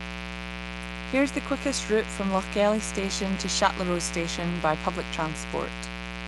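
Mains buzz runs from start to finish: sharp switching spikes, repeating twice per 60 Hz cycle, leak into the signal path and spread harmonics up into the kilohertz range. The result is a steady, raspy buzz sitting fairly loud, not far beneath the speech.

Bluetooth LC3 compression, also present throughout, is the likely source of the plainly audible breathy, grainy edge on the speech, which fits a 48 kbps stream coded in 7.5 ms frames.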